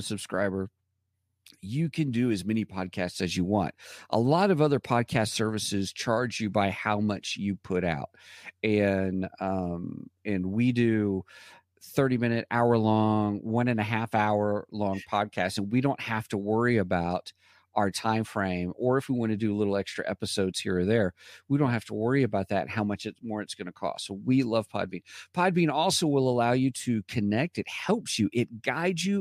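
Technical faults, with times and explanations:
No technical faults can be heard in this recording.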